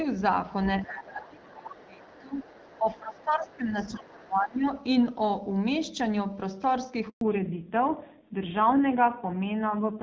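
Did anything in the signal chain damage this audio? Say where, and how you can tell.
Yes. In the call processing, the echo canceller likely mishandled double talk: from 0.85 to 4.67 s the speech is suppressed, dipping by roughly 20 dB for about three seconds.

The echo canceller also let the other side's voice leak through, faint and well below the speech, at 0.86–1.04, 1.41–2.19, 2.62–2.79 and 3.77–4.12 s, likely from residual loudspeaker echo.

On the network, a handover gap from 7.09 to 7.21 s silences the audio for 120 ms while the call switches links, and that stretch of speech is lost.

After that, at the codec stage, the call falls back to narrowband from 7.21 s to the end. Nothing above 4 kHz remains, and the rougher sound suggests a low-rate narrowband codec.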